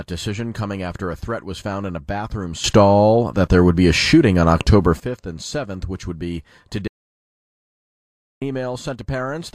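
A sudden gain jump at 2.64 s lifts the speech and background noise together by about 12 dB until 5.0 s, likely from digital gain applied without a ramp. An audio dropout to silence from 6.88 to 8.42 s leaves 1.54 s of dead silence with no room tone, likely from a lost input.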